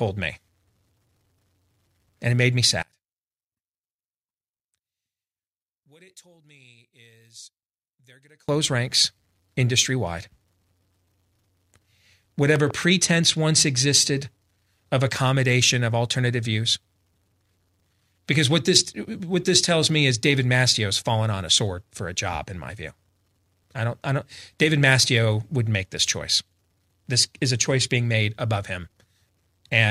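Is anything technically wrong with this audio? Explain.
Yes, there are two kinds of fault. From 2.83 to 8.49 s, the speech nearly vanishes, dropping about 31 dB. This is likely one channel inverted, cancelling centred speech when summed to mono.

Loud pops follow. A double pop sounds from 12.56 to 12.73 s, and a single one from 15.16 to 15.18 s. Each stands roughly 10 dB above the speech, likely from a voltage spike such as a switch or static.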